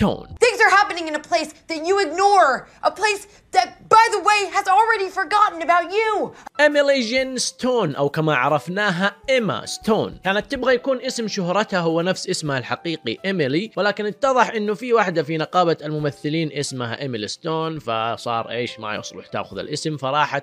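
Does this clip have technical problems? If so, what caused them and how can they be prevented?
No, there are no technical problems to diagnose in this clip, so nothing needs preventing.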